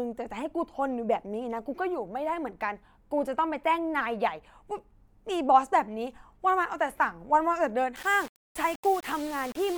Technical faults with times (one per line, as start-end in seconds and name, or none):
7.96-9.78 low bit depth without dither